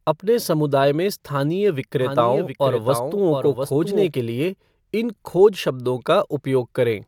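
From 2.01 s, just after "अपने समुदाय में स्थानीय", a doubled audio track appears. A second full-band copy trails by about 0.7 s, roughly 5 dB quieter, with no decay. It likely comes from a slower duplicate path. It cuts off abruptly at 4.07, before "के लिए इन खोज".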